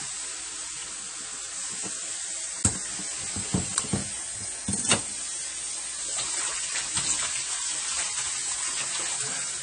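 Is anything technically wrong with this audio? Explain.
Yes, two problems are audible.

Throughout, the audio sounds dull and smeared, with a fizzy, warbling texture on sustained sounds and nothing at all above about 9.9 kHz. This is likely AAC compression, specifically AAC-LC at a low rate that fits roughly 32 kbps. At that rate the encoder spends too few bits on the spectrum. It drops the top end above the cut-off and coarsely quantises what remains, so the codec damage is plainly audible.

From 3.88 s to 5.99 s, everything abruptly plays about 5.3% fast and sits about 90 cents sharp, close to a semitone, then snaps back to normal. This is likely a drift correction step. Clock-matching software changed the playback rate in a single jump to rebalance its buffer. Because speed and pitch move together, the effect is a sudden detuning rather than a smooth glide.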